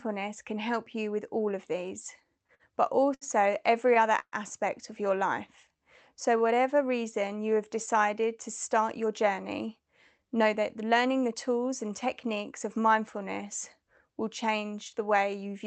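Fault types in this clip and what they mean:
Repeated stalls (stutter): Between 2.47 and 3.24 s, just after "with all of these", the speech catches and drags four times, with held-over sound filling 138 ms, the longest hold 70 ms. Packets arrived late, so the jitter buffer kept emptying and the receiver stretched the last sound.
Call audio freeze: From 4.19 to 4.35 s, just before "of your", the speech halts for 128 ms; the last sound is carried on and fades, ending in 60 ms of silence, then resumes with nothing lost. The likely cause is delayed packets draining the jitter buffer.
Jitter buffer slow-down: From 5.18 to 6.63 s, between "of your" and "reason you have decided", the speech runs at 94% speed at unchanged pitch, drawn out by 98 ms. The receiver repeated pitch periods and bits of pauses to rebuild a low jitter-buffer reserve.
Jitter buffer speed-up: From 8.80 to 11.34 s the speech runs hurried, at 108% speed with pitch unchanged, losing about a fifth of a second overall. 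The jitter buffer held too much audio, so the receiver cut short pitch-period pieces repeatedly to reduce delay.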